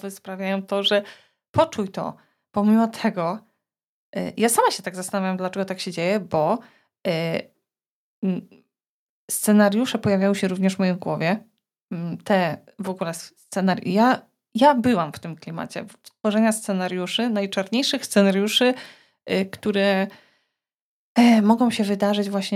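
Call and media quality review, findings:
Automatic gain rising, 0.24 to 2.25 s: voice and background swell together by about 5 dB over roughly two seconds. Probable component is the AGC on the capture side, reading the input as too quiet and ramping its gain up gradually rather than in one step.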